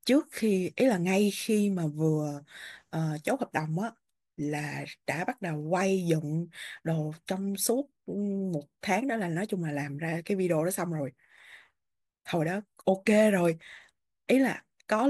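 No technical faults are audible.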